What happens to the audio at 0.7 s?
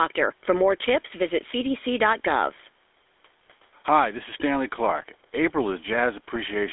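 At 0.7 s, as across the whole clip, the speech is passing through the GSM full-rate codec, which fits a 13 kbps coder. It rebuilds the voice from a vocal-tract model fed by regularly spaced pulses, cutting everything above 3.8 kHz and leaving a plainly audible buzzy, gravelly roughness.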